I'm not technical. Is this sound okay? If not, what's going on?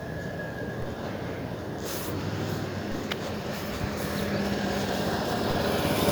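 No. There are two low thumps, at 0.82 s and 2.92 s. Each is a DC step: the waveform's centre line suddenly jumps, then drifts back. You hear a low bump or click each time. The sound itself continues unchanged.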